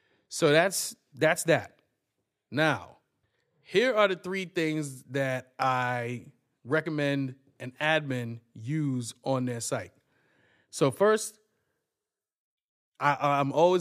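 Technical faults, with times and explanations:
No technical faults are audible in this speech recording.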